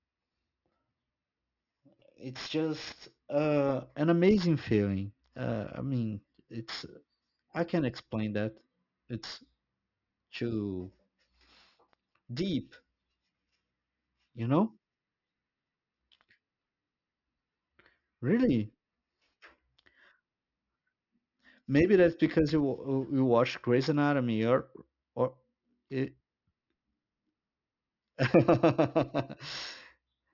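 Aliasing runs throughout. Content above 6 kHz folds back unfiltered, which fits a drop to 12 kHz. Sibilants turn gritty and metallic, with the folded content roughly 20 dB down.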